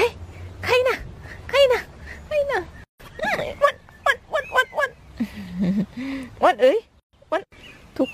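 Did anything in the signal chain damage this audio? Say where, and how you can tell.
Yes. The sound cuts to silence at 2.84–3.00 s and 7.00–7.13 s (158.6 and 133.2 ms), edges smeared, then resumes where it stopped. It's a gap at a join of encoded pieces: four-second segments encoded separately, spliced with each run's start delay and end padding untrimmed.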